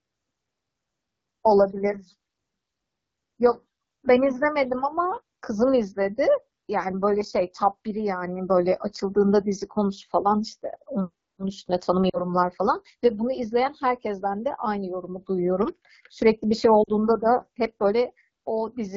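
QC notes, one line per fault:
Throughout: AMR wideband (HD Voice) codec at 8.85 kbit/s, its second-lowest rate. The sparse pulse model leaves the speech plainly rough and raspy.
12.10–12.32 s and 16.84–16.90 s: lost AMR speech frames. Each gap is about 40 ms, which fits two dropped 20 ms frames. The decoder stretches the last pitch and vocal tract settings with fading gain, so the sound smears and dips before recovering roughly.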